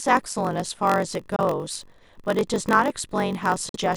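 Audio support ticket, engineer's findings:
Block size mismatch (padded), whole clip. Steady buzz at 46.9 Hz under the speech, delivery 0.938x slow with timbre intact. Upstream stage writes short blocks into a reader expecting 1024 samples. Remainder zero-filled, so a gap recurs every block.

Bluetooth dropout, likely cause, at 1.36–1.41 s and 3.69–3.77 s. Sudden silences. Audio resumes ahead, with about 23 ms and 46 ms of speech skipped, consistent with one and two lost packets. Late packets discarded before reaching the headphones.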